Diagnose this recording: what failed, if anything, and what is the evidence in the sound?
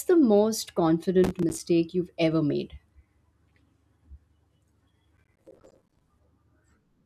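A gritty crackle tears through the speech from 1.24 to 1.60 s and again from 5.17 to 6.01 s. This is processor overload crackle at the driver or buffer stage: dozens of buffers a few milliseconds long missed their deadlines and left silent gaps.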